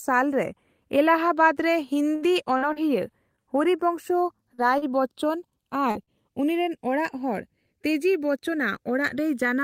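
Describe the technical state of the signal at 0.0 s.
At 0.0 s the speech carries channels drifting apart, present throughout. Separate clocks differ by about 70 ppm, sliding the inter-channel delay to under a millisecond. Summed, this sounds like slow flanging.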